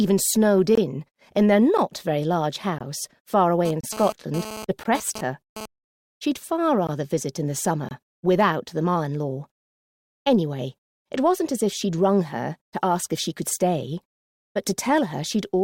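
From 0.75 to 0.78 s the first of seven short holes appears, each a gap between stream segments. The following ones fall at 1.78 s, 2.79 to 2.81 s, 3.81 to 3.84 s, 4.84 s, 6.87 s and 7.89 to 7.91 s. Each lasts roughly 10 to 30 ms and has hard edges. The timestamps of adjacent one-second segments leave a small gap, and the player fills it with silence. Unlike a packet dropout, nothing is missing: the sound resumes exactly where it stopped. The about one-second spacing gives them away.

From 3.65 to 5.66 s a GSM phone buzz sits about 12 dB below the signal, overlapping the gaps at 3.81 and 4.84 s. A nearby 2G handset transmits in bursts about 217 times a second, and the audio circuitry rectifies those pulses into a hard, raspy buzz at 217 Hz with dense harmonics. Mains hum is smoother and sits at 50 or 60 Hz. Here the buzz stops after two seconds, a pattern that fits a data transfer rather than a call.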